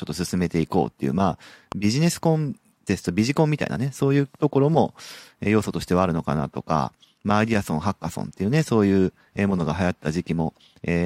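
At 1.72 to 1.74 s a single loud pop cuts across the speech, peaking roughly 10 dB above it. A sudden electrical step or pulse, likely from a plug, switch, static discharge or driver glitch, was added to the signal and shaped by the circuitry after it into a short, hard thump. Unlike a dropout or buffer glitch, the speech carries on unbroken beneath it, and it occurs once rather than as repeated crackle.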